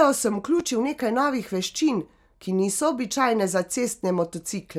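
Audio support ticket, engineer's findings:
Loud pop at 0.60–0.62 s, one hit, just before "nekaj novih veščin ki"; speech continues underneath. Likely a voltage transient from plug, switch or static, shaped downstream. Waveform: sharp spike a few dB above speech peaks. Spectrogram: thin broadband vertical stripe.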